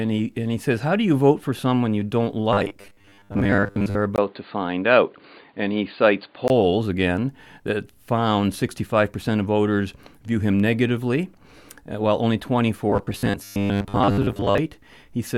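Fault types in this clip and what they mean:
Robotic sound from repeated short buffers: from 2.53 to 3.96 s, after "for someone you don't", and from 12.90 to 14.58 s, after "while only", the speech becomes a rigid metallic buzz at 100 Hz, likely from most of the audio being replaced by a repeated 10 ms buffer.
Input switched to a poorer device: from 4.16 to 6.5 s, before "again that found", the speech turns dull, with a 20 ms silence at the switch and a faint new noise floor, while the level barely changes. This is likely a change to a different microphone.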